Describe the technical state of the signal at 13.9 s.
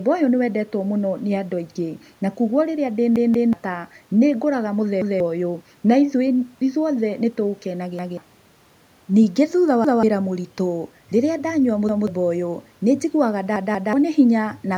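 A repeated buffer runs from 13.56 to 13.93 s. Fresh audio failed to arrive, so the device replayed its last block of roughly 186 ms, which fits an 8192-sample buffer, twice more. The speech stutters with hard joins, and roughly 0.4 s of audio is lost.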